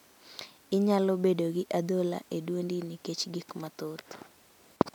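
Nothing in the recording stood out as a problem when listening to it.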